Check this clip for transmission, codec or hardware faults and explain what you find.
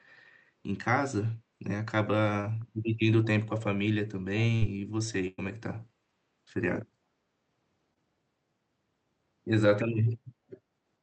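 Two kinds of network fault appear in the speech, both from the call path's packet delivery. The codec behind them sounds like Opus, with content stopping at 8 kHz.

Short concealed packet loss occurs at 2.41–2.45 s and 7.94–7.98 s. About 20 ms of audio never reached the decoder in time. The receiver covered each hole by extending the preceding sound, following its pitch where voiced and using shaped noise where not, then cross-faded back into real audio. Each spot is a brief smear or wobble, and a quick consonant there can disappear.

A burst of packet loss occurs at 4.55–4.63 s and 5.27–5.40 s. Consecutive packets arrived too late or not at all, removing about 60 ms and then about 100 ms of speech. The decoder kept synthesising the last sound while fading it down, so a voiced segment turns into a held buzz and an unvoiced one into a dying hiss. Speech then resumes further along, with the lost stretch simply gone.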